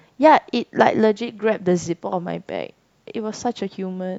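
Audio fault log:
No faults detected.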